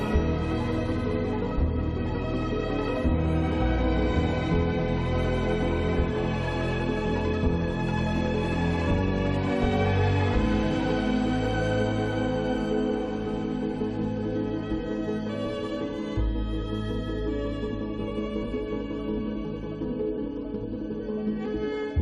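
No technical faults can be heard anywhere in this clip.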